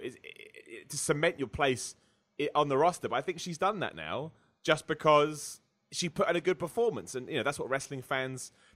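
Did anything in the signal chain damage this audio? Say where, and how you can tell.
No, no damage can be heard.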